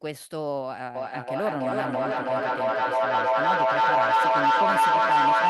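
From 0.95 s to the end of the clip, the speech is overtaken by feedback howl. Two devices sharing a room on the same call form a loop from microphone to loudspeaker and back that gains level on each pass. The repeats swell rather than die away, narrowing to a tone near 1 kHz that pulses about every third of a second and peaks about 10 dB above the speech. Ordinary echo repeats fade; this grows and locks onto one pitch.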